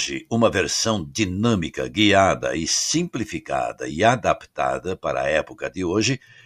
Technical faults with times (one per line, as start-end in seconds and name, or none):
none